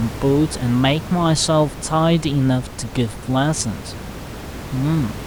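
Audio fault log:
Nothing stood out on listening to the speech.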